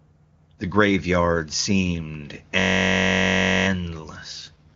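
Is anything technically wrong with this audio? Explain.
Yes. The speech has two faults.

A system hang loop runs from 2.60 to 3.67 s, right after "graveyard seemed". The machine froze while the sound hardware kept replaying one 21.33 ms slice, which fits a 1024-sample buffer. It repeats about fifty times, giving a steady buzz near 47 Hz.

An AMR rate drop starts at 4.32 s and lasts to the end. The sound fits the AMR wideband codec falling from 23.85 to 6.6 kbit/s to protect a weak link. The bandwidth stays the same and nothing drops out, but the voice turns rough, raspy and synthetic.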